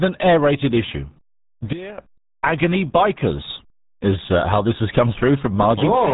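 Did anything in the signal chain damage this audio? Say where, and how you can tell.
Yes. The codec stage did the most damage: throughout, the speech is muffled and gargly, with nothing above 3.8 kHz and heavy artefacts. That fits RealAudio 14.4, an 8 kbit/s dial-up-era speech coder that discards the upper band and coarsely models what remains.

There is also a sudden gain jump. From 1.73 to 1.98 s, just before "agony bikers is uh", the level drops by about 18 dB in one step, and speech and background fall together. That points to a gain stage. The likely cause is a digital gain or bit shift applied with no ramp.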